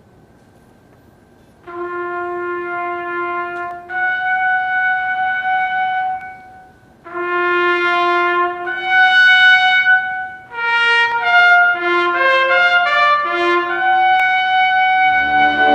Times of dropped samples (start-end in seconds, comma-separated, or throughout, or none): 3.71, 6.21, 11.12, 14.20